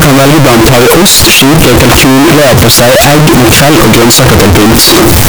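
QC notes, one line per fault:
Throughout: float read as integer. The 32-bit floating-point samples are likely being read as 32-bit integers, so each sample's sign and exponent bits, not its actual amplitude, decide the output level. The waveform collapses into a near-square shape sitting at an almost fixed, high level regardless of how quiet the speech was, making it extremely loud and harsh, with background noise raised to the same level as the speech. The pitch contour still comes through.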